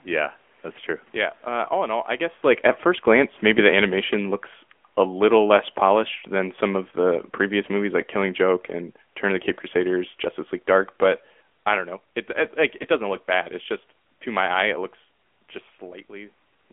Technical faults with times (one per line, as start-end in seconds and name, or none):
0.00-16.73 AMR narrowband mobile codec